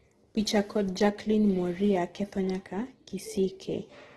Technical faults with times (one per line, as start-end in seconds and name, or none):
0.00-4.17 Opus compression